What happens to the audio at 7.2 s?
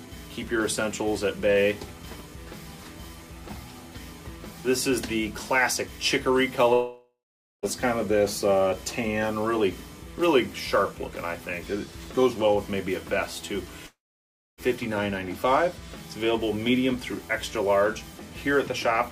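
At 7.2 s you're inside a gap from 6.73 to 7.66 s, likely a long network dropout: the last sound smears into a fading buzz, then silence, and about 0.9 s never returns.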